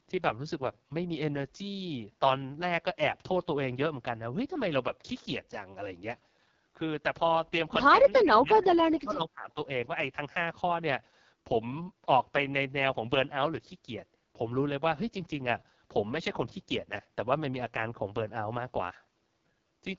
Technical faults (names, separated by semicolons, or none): AMR wideband (HD Voice) codec; speech suppressed in double talk